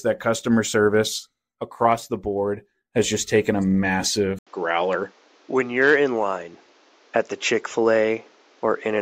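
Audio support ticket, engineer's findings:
Input likely switched to a poorer device at 4.39 s: 80 ms gap, then speech band-limited to 7.6 kHz, duller, faint new noise floor, same level.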